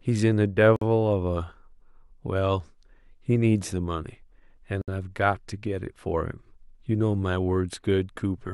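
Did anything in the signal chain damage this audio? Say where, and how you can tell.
Yes: a gap at a join of encoded pieces, at 0.76 to 0.82 s (52 ms) and 4.82 to 4.88 s (64 ms), with the joins falling every 4.0 s. This is a codec-stage fault. The speech was encoded in 4-second pieces and spliced without trimming, so each piece's encoder start-up delay and final-frame padding remain as silence. You hear continuous speech drop out with smeared edges, then resume exactly where it stopped.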